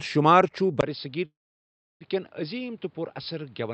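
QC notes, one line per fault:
0.81 s to the end, input switched to a poorer device: after a brief dropout of about 20 ms the speech turns dull and boxy, drops roughly 10 dB, and has nothing above 5.3 kHz, plus a new faint noise floor. That's likely the recording jumping to a narrower-band mic or headset profile.
1.25–2.03 s, call audio freeze: the speech stalls for about 750 ms. A short fading tail carries on from the last sound, then roughly 680 ms of silence. The speech resumes right where it stopped, so nothing is lost, but everything after runs about three quarters of a second late. Likely cause: packets held up in transit and the jitter buffer running dry.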